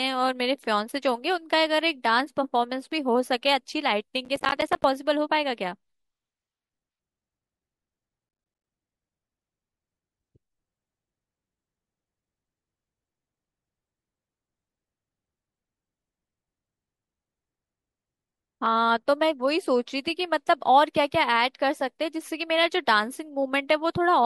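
From 4.25 s to 4.84 s the speech is broken up by processor overload crackle. For just over half a second the system could not finish its small audio buffers on time, and it missed deadline after deadline. Each missed buffer came out as a brief hard-edged gap of silence. The gaps point to buffers of about 10 ms, with roughly twenty lost. Together they sound like a gritty, tearing crackle over the speech, and it stops once the load clears.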